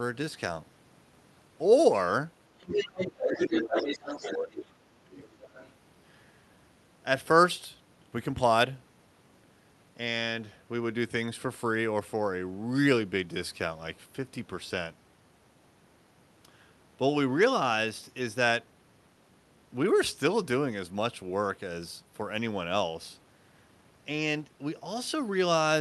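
This is a speech recording carried over a call link whose band tops out around 12 kHz, consistent with a super-wideband call codec. From 2.59 to 4.34 s the other side's voice is leaking through at roughly the same level as the talker. The likely cause is a loudspeaker at the talker's end feeding back into the microphone, with the echo canceller failing to remove that far-end signal. A second, much fainter burst of leakage sits well below the talker from 5.22 to 5.7 s. Where the two voices overlap, the result is speech suppressed in double talk. Between 3.36 and 5.16 s the talker's level drops, at its deepest by a large margin, with about a second and a half affected. This is most plausibly the canceller attenuating everything because it could not separate the near-end voice from the echo.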